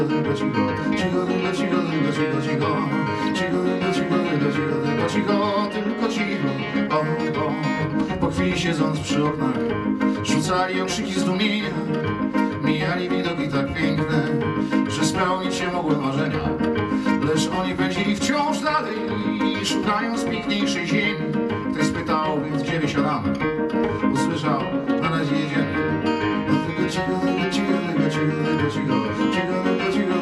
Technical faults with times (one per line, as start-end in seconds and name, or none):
none